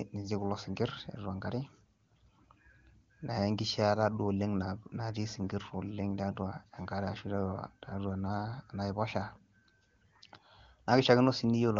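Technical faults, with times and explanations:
The speech carries the full wideband character of AMR wideband (HD Voice) coding at one of its higher rates, which fits roughly 24 kbit/s, with the upper band up to 7 kHz present and any trace of the coding faint at most.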